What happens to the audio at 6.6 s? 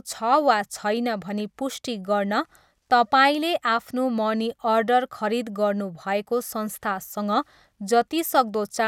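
Nothing goes wrong at 6.6 s: the speech carries straight through that moment with no dropout, click, distortion or other fault.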